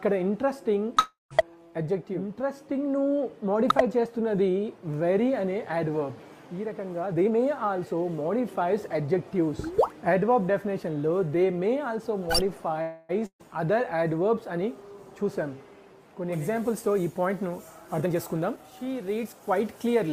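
At 0.99 to 1.33 s there is a call audio freeze, likely from packets held up in transit so the jitter buffer ran dry. The last sound is stretched into a fading buzz for about 0.31 s, with 150 ms of that silent. Nothing is lost; the audio simply resumes later. On a spectrogram it looks like smeared, flattened harmonics decaying into a blank column, and on the waveform a shrinking envelope ends in a flat line.

From 7.01 to 9.15 s a jitter buffer speed-up trims pitch-period-sized pieces over and over to work off excess delay. It plays about 15% fast at unchanged pitch and sounds hurried, removing roughly a third of a second. On the waveform the cycles keep their length while whole periods are cut out, with no frequency shift on the spectrogram.

A second freeze runs from 12.82 to 13.21 s. It fills about 0.27 s with a fading buzz and never reaches silence, so the spectrogram shows a smeared tail but no blank gap.

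Right after it, from 13.26 to 13.41 s, comes a burst of packet loss. About 140 ms of audio is missing and is replaced by a continuation of the last sound that fades and ends in about 80 ms of silence. When the audio returns it has jumped ahead. On the spectrogram this appears as a brief smear followed by a gap and a hard restart.

From 16.33 s to the end, pre-emphasis is left on, following an FM 75 µs curve. Without the matching cut, 10 kHz sits about 13 dB above 1 kHz, so the sound is thin, bright and hissy. The spectrogram shows a bright top band, and the waveform looks spiky.

Within that stretch, from 17.85 to 19.47 s, a second jitter buffer speed-up runs about 16% fast and again removes roughly a third of a second.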